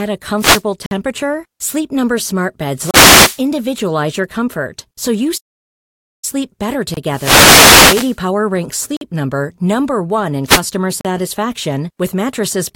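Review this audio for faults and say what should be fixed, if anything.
Wireless microphone noise hits at 0.37–0.63, 2.75–3.42, 7.08–8.19 and 10.44–10.63 s: bursts of static as the FM radio link fades and receiver noise rises over the speech. Fix this by improving the antenna placement, using diversity reception, and keeping a clear line of sight to the receiver.

Gaps between stream segments at 0.86, 2.91, 6.94, 8.97 and 11.01 s: hard-edged silent holes of 28 to 51 ms, about 2 s apart. This fits segment timestamps that leave a small gap which the player fills with silence. Correct the segment timestamping so that consecutive segments join exactly.

Playback stall from 5.37 to 6.25 s: the sound cuts out mid-flow for about 0.85 s and then resumes, likely because the player ran out of buffered data. Increase the playback buffer and check network throughput so the player never runs dry.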